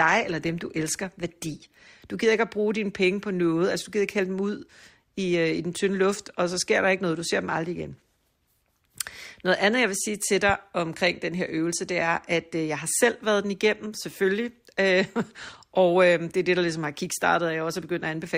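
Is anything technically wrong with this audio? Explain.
Yes. From 0.0 to 2.0 s there is an adaptive stream starting at a low bitrate. The player begins on a cheap version, consistent with roughly 24 kbit/s Opus, then switches to something nearer 64 kbit/s. Until 2.0 s the treble is thin and artefacts are stronger, then quality improves suddenly without a gap.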